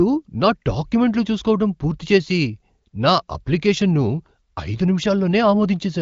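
Speech, with no technical faults to report.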